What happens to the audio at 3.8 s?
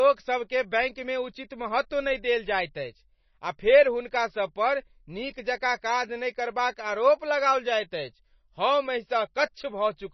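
At 3.8 s the speech carries MP3 compression damage, present across the whole clip rather than starting there. It is likely from an encoder starved of bits, as a rate near 24 kbps would be, which removes everything above about 5.9 kHz and lets weak frequency lines switch on and off between frames. The result is a dull, watery, swirling sound, with s sounds chirping metallically and attacks smeared.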